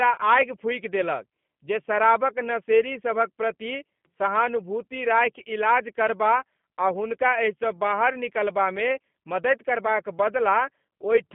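Throughout, a G.729 codec at around 8 kbit/s rebuilds speech from sparse pulses within 150 Hz to 3.5 kHz, leaving it narrow, rough and plainly synthetic.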